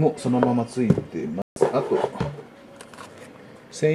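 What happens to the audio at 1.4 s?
A digital broadcast dropout: the receiver lost valid frames, consistent with about six failing their checksum, and muted from 1.42 to 1.57 s. The sound cuts or quickly fades to silence for roughly 0.14 s, then resumes further along, with the missing stretch gone.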